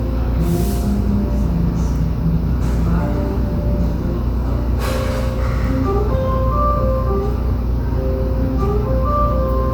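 No technical faults are audible.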